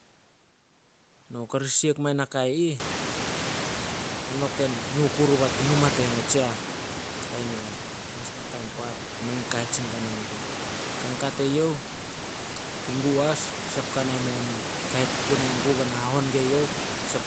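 A speech recording with nothing technically wrong to point to, at any time or from any cause.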